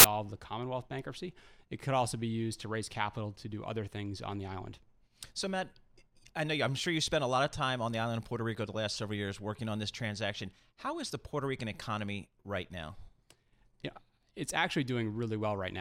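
At the very start, from 0.00 to 0.04 s, the speech is preceded by a burst of file tags played as audio. An embedded cover picture, stored as compressed data, has been decoded as if it were samples, so it comes out as very loud white noise with abrupt edges. What separates it from a click or a codec glitch is its flat, hissing spectrum at a very loud level and its position before any real sound begins.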